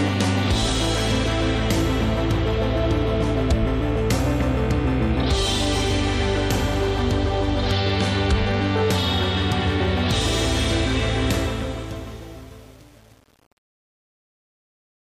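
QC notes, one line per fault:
11.31–15.06 s, truncation distortion on a fade: as the fade-out drops toward silence, the tail turns gritty, worst from 11.63 s to the end. The fade stage is rounding its output to too few bits with no dither, which fits roughly 7-bit resolution, so the shrinking waveform collapses into a few coarse square steps instead of tapering away.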